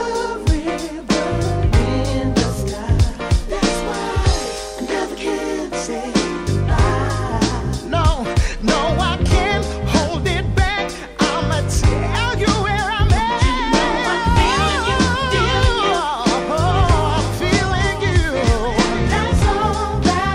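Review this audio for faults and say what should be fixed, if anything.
A doubled audio track runs from 16.7 to 19.4 s: a second full-band copy, about 10 dB quieter and roughly one second behind, cuts in and out abruptly with no decay or room colour. It is likely a second capture through a slower path or an edit leaving two offset copies. Fix it by removing the duplicate, and prevent it by routing each source through a single capture path and checking edits for overlapping copies.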